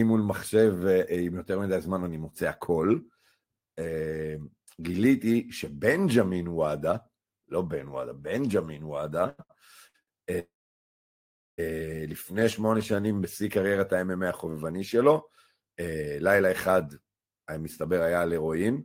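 Between 9.29 and 10.09 s the speech hits four short stalls from a late packet, at 9.29, 9.43, 9.87 and 10.02 s. Each time the jitter buffer ran dry and the last sound was held for 92, 69, 68 and 51 ms, giving brief drawn-out sounds with a faint buzz or dip before the speech resumes intact.

At 10.39 s a call audio freeze begins and lasts until 11.60 s. The last sound trails off as a fading buzz or hiss and then about 1.1 s of silence before speech picks up where it stopped. A long hold-up of packets in transit is the likely cause, inserting roughly 1.2 s of delay with nothing lost.

From 12.32 to 13.21 s a jitter buffer slow-down plays the speech at 87% speed. Repeated pitch periods add 124 ms to rebuild the reserve, so syllables stretch out at unchanged pitch.

From 15.86 to 16.50 s a jitter buffer speed-up runs the speech at 111%. Short pitch-period chunks, around 70 ms in total, are cut to reduce the built-up delay, making the passage sound hurried at the same pitch.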